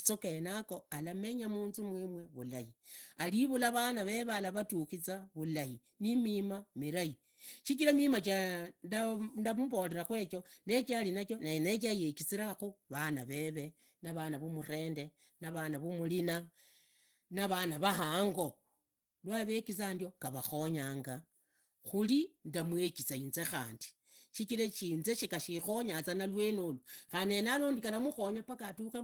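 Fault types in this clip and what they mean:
Opus compression: the audio was likely passed through an Opus encoder starved of bits, at a rate that fits about 16 kbps, and running in its hybrid speech mode. In that mode, a speech model codes the lower band and the upper band is rebuilt from coarse band energies. The damage is plainly audible. The speech sounds muffled and hoarse, with a rough, grainy texture, even though the bandwidth still reaches about 20.2 kHz.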